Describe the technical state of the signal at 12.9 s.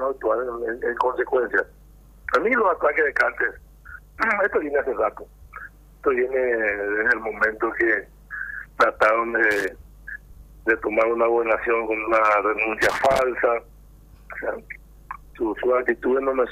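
At 12.9 s there is loose connector crackle, 12.82 to 13.22 s: a worn contact chops the signal irregularly, giving scratchy bursts seen as jagged waveform dropouts and broadband vertical spectrogram streaks.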